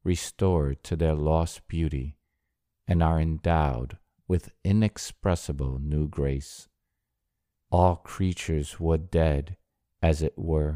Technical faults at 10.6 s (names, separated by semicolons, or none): none